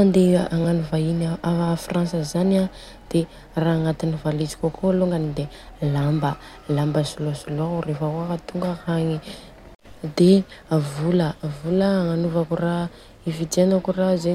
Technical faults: repeated buffer

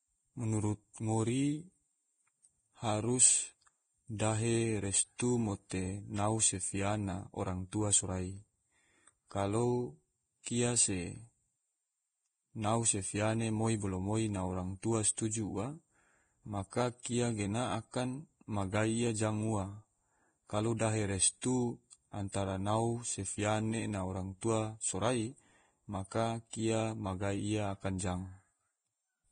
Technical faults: Vorbis compression; pre-echo

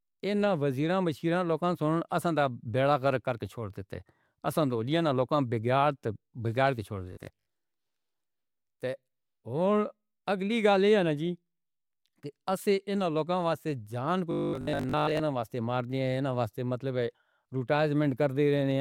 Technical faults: robotic sound from repeated short buffers

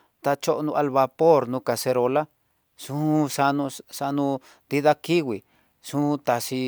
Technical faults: none

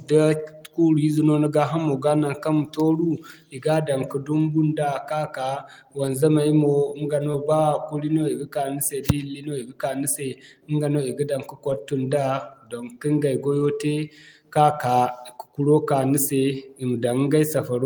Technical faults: lost packet rebuilt from error correction; short concealed packet loss

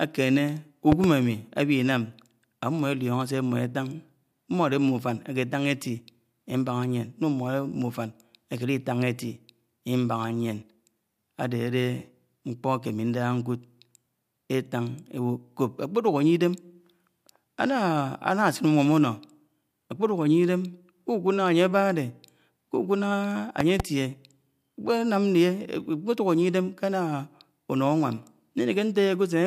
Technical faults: loud pop

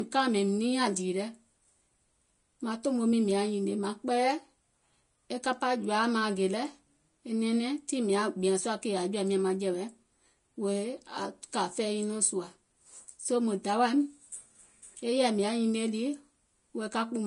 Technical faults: low-bitrate audio saved at a high bitrate

